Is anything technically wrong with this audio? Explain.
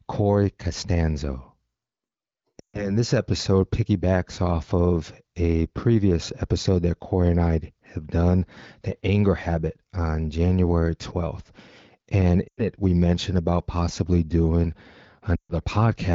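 Yes, there are lost AMR speech frames in three spots: 2.60 to 2.97 s (just before "this episode piggybacks off"), 12.48 to 12.60 s (before "it we mentioned about"), and 15.36 to 15.53 s. Corrupted frames failed their check, so the wideband decoder stretched the last good frame with falling gain. You hear the sound drop to near silence within two frames before it recovers a bit rough.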